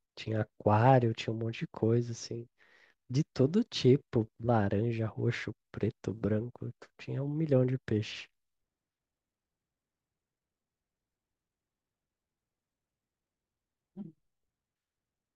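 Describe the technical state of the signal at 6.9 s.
At 6.9 s the speech signal is intact, with no fault audible at that moment.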